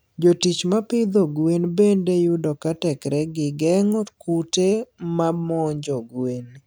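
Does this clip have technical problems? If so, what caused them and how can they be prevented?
No, this speech clip has no technical faults to report.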